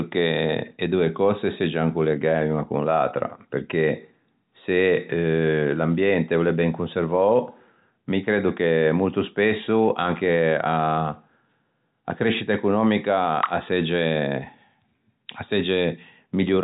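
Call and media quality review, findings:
No faults found in call and media quality review; the speech passes through G.711 telephone coding as expected, band-limited to 4 kHz.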